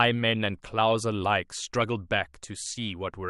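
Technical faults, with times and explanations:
No technical faults can be heard in this speech clip.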